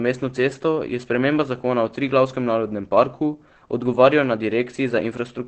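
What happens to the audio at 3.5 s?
At 3.5 s the speech carries heavy damage that runs through the whole clip. Nothing sounds above about 8.3 kHz, and the voice is muffled and hoarse. That points to a low-rate speech mode, most likely Opus compression near 12 kbps.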